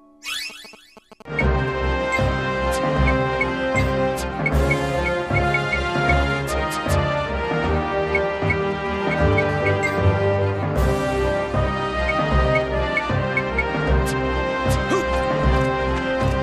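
A nearby 2G phone exchanging signalling bursts has its radio pulses rectified by the audio circuit, producing GSM signalling bursts from 0.50 to 2.40 s: a galloping tick-and-buzz pattern at 217 Hz, roughly 20 dB below the signal. From 9.49 to 10.37 s, a phone in an active call transmitting 217 times a second causes GSM phone buzz, a steady, raspy, harmonic-rich 217 Hz drone about 20 dB below the signal.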